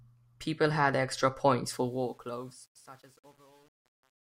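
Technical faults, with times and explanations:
1.74–4.34 s, truncation distortion on a fade: Right after "had extra points" the fade-out turns gritty. From about 2.15 s on it's at its worst. The gain stage is dropping low bits without dither, which fits roughly 9-bit resolution. As the level sinks toward the smallest step, the waveform collapses into a few coarse square steps.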